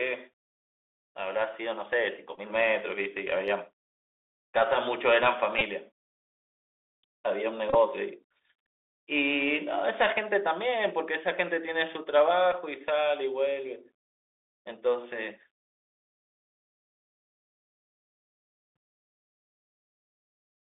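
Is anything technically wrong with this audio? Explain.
Yes. The audio has two kinds of fault.

Throughout the clip, the speech passes through a Bluetooth CVSD headset codec, which fits a 64 kbit/s CVSD link. It sends one up-or-down bit per sample with an adapting step, limiting the band to roughly 300 Hz to 3.6 kHz. The result is plainly audible: s sounds turn scratchy, loud bright sounds distort, and a granular hiss sits under the voice.

There are also Bluetooth headset packet repeats, where lost voice packets were replaced by decoding the previous packet again. This happens at 2.36–2.39 s and 5.59–5.62 s, each about 18.8 ms, and at 12.52 s, about 11 ms. Each is heard as a short buzzy stutter where the sound briefly loops.

At 7.70–7.75 s, 37.5 ms of audio was lost in scattered runs over about 52 ms, the longest around 20 ms. The 3.75 ms repeat cycle produces a rough buzz near 267 Hz.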